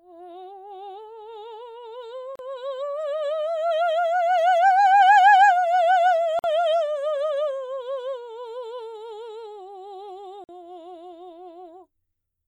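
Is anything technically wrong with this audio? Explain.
Yes. A gap at a join of encoded pieces occurs at 2.36, 6.39 and 10.44 s, every 4 s. Separately encoded music segments were joined untrimmed, leaving encoder delay and padding, so 35 to 49 ms gaps with smeared edges open before the music resumes.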